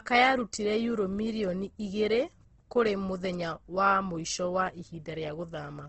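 Throughout, the speech carries plainly audible Opus compression, likely from low-bitrate music-mode coding: band energies are kept but detail is noise-filled, giving a grainy, rough, band-limited sound.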